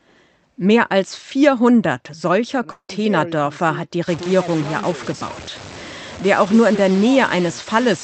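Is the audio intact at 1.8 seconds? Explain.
Yes, the speech is intact at 1.8 seconds, with no dropout, glitch or other fault at that moment.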